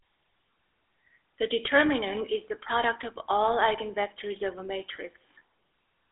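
From start to finish the speech carries GSM full-rate codec damage, which fits the 13 kbps full-rate mode. The vocal tract is modelled and driven by a sparse pulse excitation, leaving a plainly buzzy, gravelly roughness. A spectrogram shows energy confined to roughly 300 Hz to 3.6 kHz, with nothing above 3.8 kHz.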